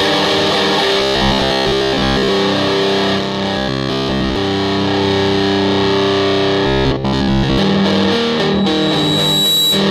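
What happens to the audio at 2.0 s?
At 2.0 s you're inside a stretch of robotic sound from repeated short buffers, 1.00 to 2.29 s: a rigid, metallic buzz at 66.8 Hz, likely from the last 15 ms being replayed over and over, standing in for most of the audio in that stretch.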